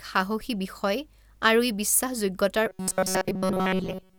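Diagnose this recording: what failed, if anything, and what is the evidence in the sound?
From 2.69 s to the end, the speech collapses into a rigid, metallic buzz at 188 Hz that only loosely tracks the syllables. This is robotic sound from repeated short buffers, likely a driver or buffer underrun looping roughly 5.3 ms of audio throughout while the incoming audio is skipped.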